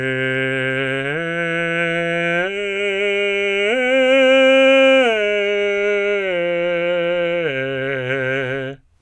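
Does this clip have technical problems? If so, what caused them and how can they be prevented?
No, this music clip has no audible technical problems.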